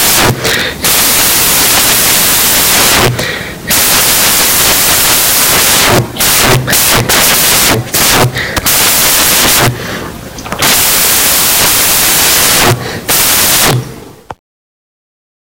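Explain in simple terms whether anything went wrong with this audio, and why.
Something went wrong in how the audio data was read back: the samples were built from the wrong bytes. Each sample is stored as a few bytes, and here the reader stitched them together in the wrong order or off by one byte. The tiny, rapidly changing details ended up as the loudest part of every value. For the whole clip, about 15 seconds, this comes out as loud hiss like white noise.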